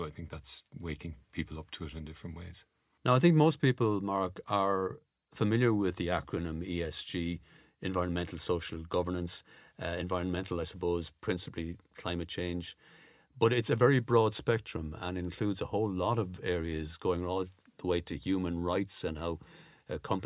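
Speech, with no technical fault to be heard anywhere in the recording. Nothing in the clip needs a time or a cause.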